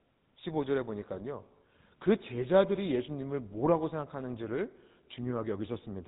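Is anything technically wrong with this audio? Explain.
Yes. Throughout the speech, a GSM full-rate codec, consistent with roughly 13 kbps, models the vocal tract with sparse pulse excitation and discards everything above 4 kHz, leaving a muffled, buzzy, gravelly roughness.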